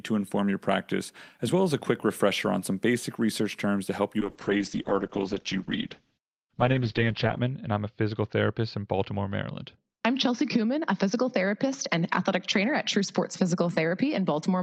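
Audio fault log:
4.23 s to end: call bitrate drop. Just after "terms to help you", the encoder rate falls from 40 to 8 kbps, bottoming out for 3.2 s. Audio bandwidth narrows from 20 kHz to 8 kHz, so speech turns muffled, with coarse, watery coding.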